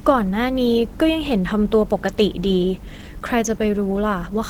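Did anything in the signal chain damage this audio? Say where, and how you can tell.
Yes. Opus compression throughout, at the codec stage: the speech is hoarse and grainy though it still reaches 20.1 kHz, likely hybrid mode near 16 kbps.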